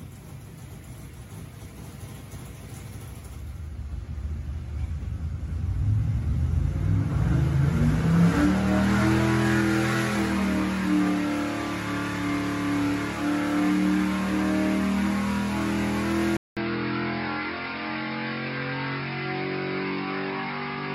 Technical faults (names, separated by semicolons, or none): input switched to a poorer device